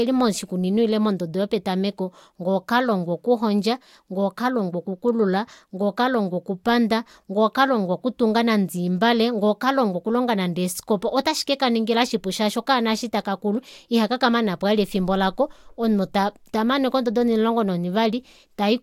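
A speech recording, with nothing technically wrong with it.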